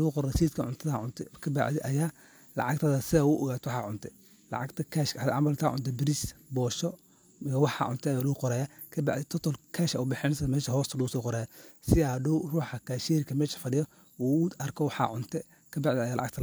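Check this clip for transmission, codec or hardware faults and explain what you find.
Nothing in this recording stood out as a problem on listening.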